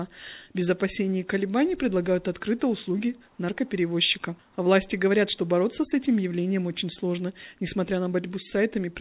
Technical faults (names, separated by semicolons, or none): none